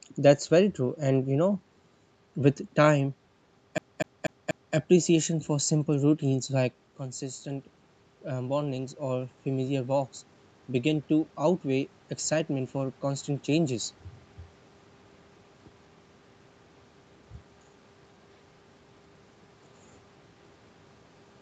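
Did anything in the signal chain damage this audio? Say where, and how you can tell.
Yes. At the playback stage, a CD stuck on one turn makes the speech stutter from 3.78 to 4.75 s. A scratch keeps throwing the laser back a track, so a 0.24 s slice repeats four times, each with a brief mute, just before "appreciation for simple".

In call processing, automatic gain rising follows a drop of about 11 dB in the input level, as the talker moves back around 6.5 s. Just after "appreciation for simple", from 6.28 to 10.03 s, the control slowly adds about 4 dB, so the voice and the room noise swell together.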